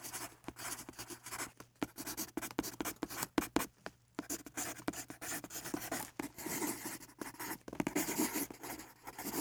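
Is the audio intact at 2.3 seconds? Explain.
Yes, at 2.3 seconds the audio plays through cleanly, with no dropout, click, distortion or other fault at that point.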